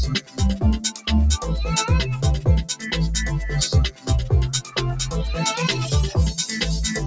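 A noise suppressor designed for speech is running on this sound for the whole clip. It treats sustained tones, ambience and decay as noise, so the level keeps pumping up and down by around 10 dB. Transients pass through largely intact while held material and tails are pulled down, which leaves the sound fluttering and thinned. The call microphone processing is also present, and nothing is reproduced above 8 kHz.

The suppressor cuts the sound hardest in five places: 0.20 to 0.41 s, 0.85 to 1.08 s, 2.71 to 2.91 s, 3.91 to 4.10 s and 4.62 to 4.78 s. Each time it misjudges the material as noise and drops it by about 14 dB (about 13 dB in the last). Each dip lasts roughly a fifth of a second (about 0.15 s in the last) and is heard as a sag in level or a decay cut short.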